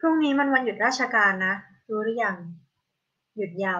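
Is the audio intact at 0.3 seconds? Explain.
Yes, the audio is intact at 0.3 seconds, with no fault to be heard at that moment.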